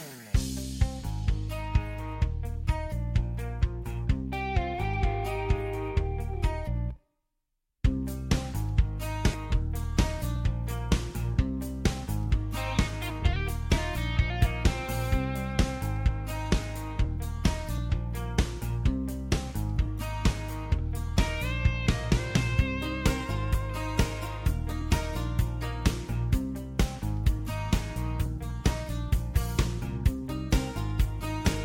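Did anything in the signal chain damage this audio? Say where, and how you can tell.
Yes. At 9.33 s the jitter buffer dropped about a fifth of a second of queued audio, a skip ahead. The sound jumps forward with no gap.

From 12.27 to 21.08 s, a jitter buffer speed-up removes short pitch-period slices, some 50 ms in total. The sound runs 1% fast at unchanged pitch.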